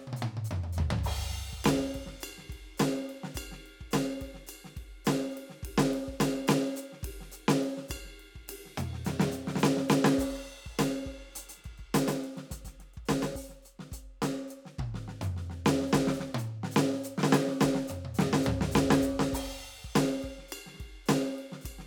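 From 11.38 s to 13.36 s the music turns into a doubled audio track: a second, full-band copy sits around 150 ms behind the original and about 5 dB quieter, giving a smeared slapback with no room tail. It likely comes from the signal being captured again by a slower path. On a waveform each transient gains a smaller twin; on a spectrogram every onset repeats as a fainter vertical stripe, beginning and ending abruptly.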